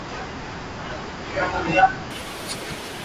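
From 2.11 s to the end of the speech, at about 3.05 s, a wrong sample rate fault takes hold. The audio suddenly runs at twice its proper speed and a full octave higher, 12 semitones up, which fits 16 kHz material played out at 32 kHz with no conversion. Unlike a pitch shift or time-stretch, where only one changes, speed and pitch jump together by the same 2:1 ratio, giving the hurried, chipmunk-like quality.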